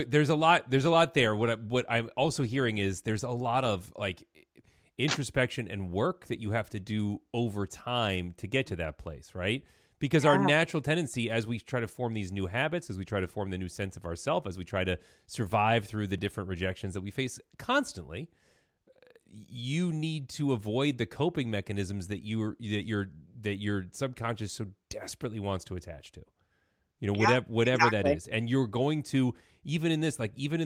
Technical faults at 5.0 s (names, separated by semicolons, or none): none